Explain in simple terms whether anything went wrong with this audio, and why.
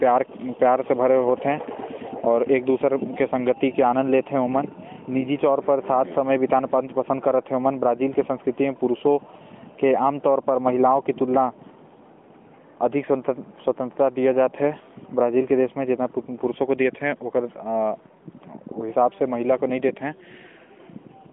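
Nothing went wrong: the speech was carried over an AMR narrowband mobile codec, which gives it the thin, phone-call sound of a link passing only about 200 Hz to 3.4 kHz, and that is simply how such a line is meant to sound.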